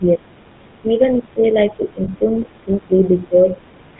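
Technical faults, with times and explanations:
Throughout, GSM full-rate codec: buzzy, gravelly roughness and no content above 4 kHz, which fits 13 kbps GSM full rate coding the vocal tract with sparse pulse excitation.
0.00–0.23 s and 0.46–3.60 s, speech suppressed in double talk: the level dips by up to about 15 dB, likely an echo canceller turning the talker down while the far side spoke.
2.04–2.09 s, lost GSM frames: a brief rough, metallic ring lasting 40 ms, where the decoder repeated the last good frame, which fits two lost frames.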